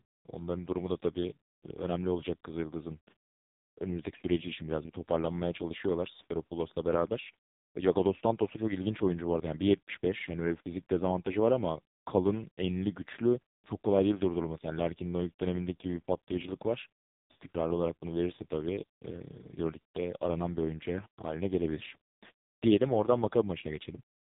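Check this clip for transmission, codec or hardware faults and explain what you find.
One codec fault runs through the whole speech clip. From start to end, AMR narrowband mobile codec coding squeezes the voice through a vocal-tract model at a bitrate that fits AMR-NB's lowest 4.75 kbps mode. It heavily damages the sound, which turns buzzy and synthetic, with nothing above 3.8 kHz.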